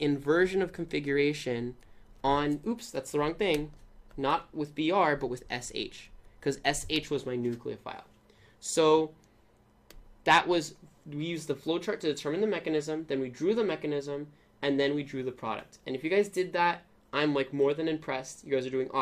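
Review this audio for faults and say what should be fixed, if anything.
Nothing to fix: no faults heard anywhere in the clip.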